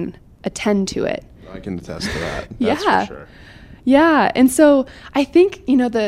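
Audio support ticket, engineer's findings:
Findings: no audio fault found in the speech clip.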